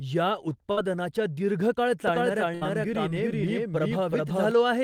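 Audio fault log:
0.71–0.83 s and 2.55–2.64 s, burst of packet loss: in each gap the last sound is stretched and faded, as a held buzz or thinning hiss, for about 54 ms and then 64 ms. About 40 ms of the actual signal never arrives, so the audio resumes slightly further on. The second gap also leaves the stream running about 24 ms later than before.
2.08–4.51 s, doubled audio track: a second, full-band copy of the speech runs behind the original by roughly 0.4 s and at about the same level, so every syllable is repeated as a clean, uncoloured echo with no decay. It switches in and out abruptly at both ends. This is likely a second capture of the same source through a slower path, mixed in alongside the direct feed.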